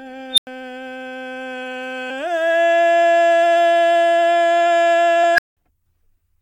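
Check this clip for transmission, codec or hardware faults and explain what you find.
The music has two kinds of fault, each occurring twice: an unstable filter and damaged data in a compressed stream.

Unstable filter, 0.33 to 0.47 s and 5.34 to 5.57 s. A recursive filter got coefficients that put it past its stability limit, so each pass fed more energy back than it lost. A tone near 4 kHz in the first event and around 1.5 kHz in the second swells within 45 ms and 42 ms, hits clipping, overflows, and drops to silence for about 93 ms and 186 ms until the filter resets. A compressed-stream glitch has no comparable rising squeal followed by a dead gap.

Damaged data in a compressed stream, at 2.09 s and 5.23 s. Corrupted bytes left the decoder with frames it couldn't read correctly, so it lost sync and had to search for the next valid frame header. Each event is a brief chirp or blip, at most about 18 ms long. 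Unlike the filter fault, nothing builds up. The disturbance starts and ends abruptly. The second blip comes about 0.1 s before the second filter squeal starts.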